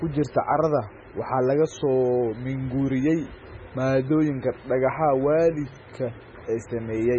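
Right through the speech there's a watery, swirly texture and nothing above 8.2 kHz, which points to heavy MP3 compression, likely at a bitrate around 16 kbps. Short on bits, the encoder chops the treble and lets weak frequency lines flicker on and off between frames.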